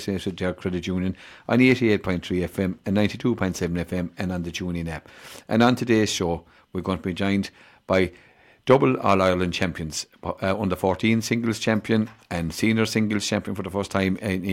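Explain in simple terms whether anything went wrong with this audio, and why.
Nothing went wrong here.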